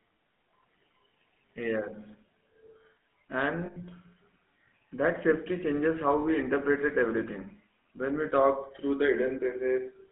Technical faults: GSM full-rate codec; lost GSM frames

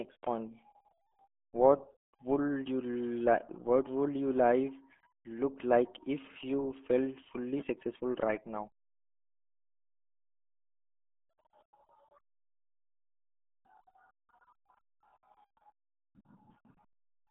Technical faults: RealAudio 14.4 codec

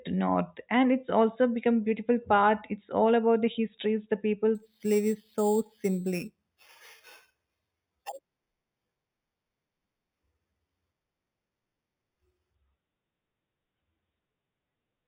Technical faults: imaging from sample-and-hold upsampling

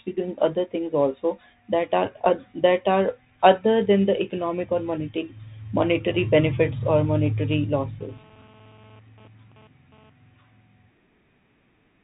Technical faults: Bluetooth CVSD headset codec; GSM phone buzz

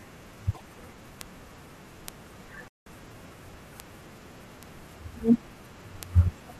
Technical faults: damaged data in a compressed stream; bit error spike; playback stall

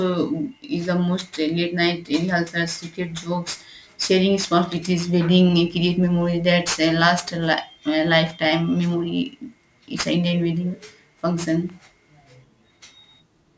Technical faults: aliasing

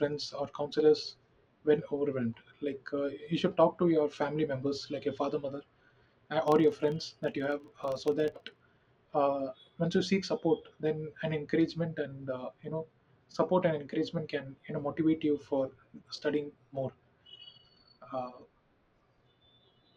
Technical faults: filter restarted on every block

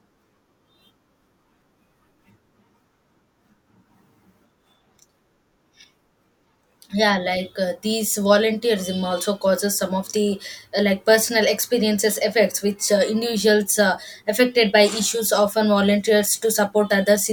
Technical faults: none

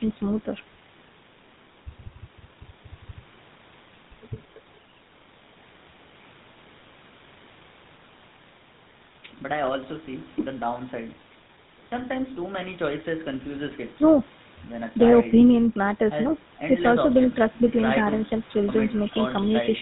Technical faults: GSM full-rate codec

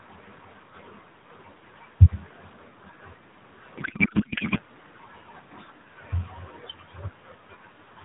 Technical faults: codec payload misread

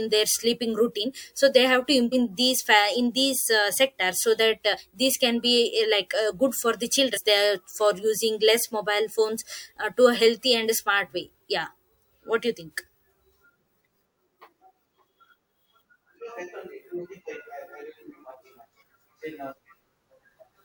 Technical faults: compressed frames skipped

